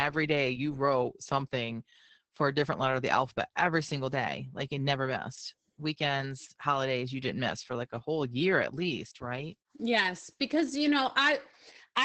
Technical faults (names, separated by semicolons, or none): Opus voice compression